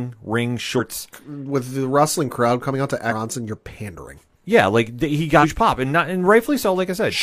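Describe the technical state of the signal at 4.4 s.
At 4.4 s the speech signal is intact, with no dropout, clipping or other fault at that moment.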